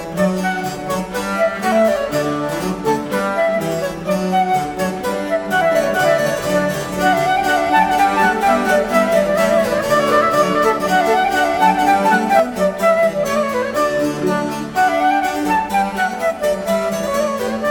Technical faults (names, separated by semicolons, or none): doubled audio track